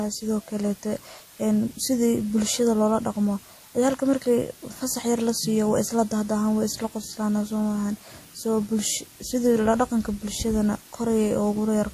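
From start to finish the speech sits on a steady, even hiss about 25 dB down. That's low bit depth with dither, pointing to roughly 7 bits, with the rounding error turned into flat noise rather than distortion. Alongside that, nothing comes through above 15.2 kHz, and the different codec artefacts are heard together, likely from transcoding between lossy codecs, an MP3 then WMA chain.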